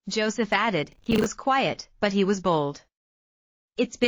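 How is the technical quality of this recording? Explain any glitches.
The recording has one glitch: a burst of processor overload crackle from 0.92 to 1.26 s. For about a third of a second the sound turns gritty and torn, with hard-edged clicks riding on top. The processor was falling behind its buffer deadlines, and instead of fresh samples each late buffer repeated stale audio. The spacing of the clicks fits buffers of around 10 ms, with about 20 missed before the load eased and the crackle stopped.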